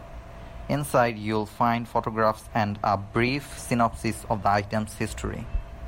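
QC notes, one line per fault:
No faults heard anywhere in this speech recording.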